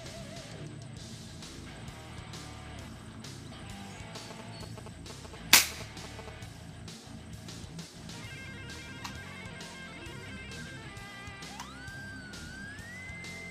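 A galloping dit-dit-dit of short buzzes near 217 Hz runs from 4.16 to 6.29 s, nearly as loud as the sound itself. These are GSM signalling bursts: a nearby 2G phone exchanging brief radio bursts with the network, which the audio circuit rectifies into audible pulses.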